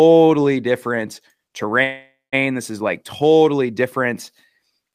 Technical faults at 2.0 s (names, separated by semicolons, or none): call audio freeze